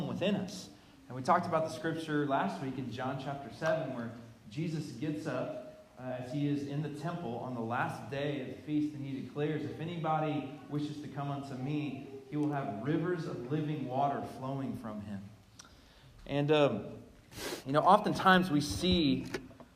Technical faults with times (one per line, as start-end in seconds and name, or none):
none